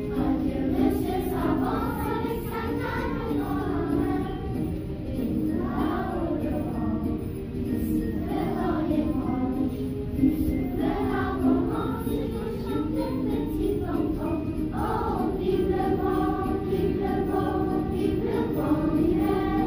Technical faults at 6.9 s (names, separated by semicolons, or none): clock slip clicks